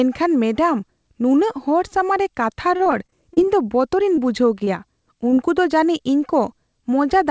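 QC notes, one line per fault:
2.62–3.47 s, repeated packet loss (robotic sound): Just after "ᱥᱟᱢᱟᱝ ᱨᱮ" the speech turns choppy, with small pieces dropping out. A run of lost packets left repeated holes, the longest about 30 ms. Each was patched by extending the preceding sound before the next hole arrived.
4.16 s, 4.64 s, 5.30 s, short concealed packet loss: Three brief smears or wobbles, each replacing about 20 ms of speech that never arrived. The receiver covered each gap by carrying the last sound forward, as pitch or shaped noise, then crossfaded back into the real signal.
5.34–5.39 s, short stall from a late packet: Right after the third smear, a sound lingers slightly too long with a faint buzz or dip. Nothing is lost. A packet arrived about 23 ms late, the jitter buffer emptied, and the last sound was stretched until playback resumed where it had paused.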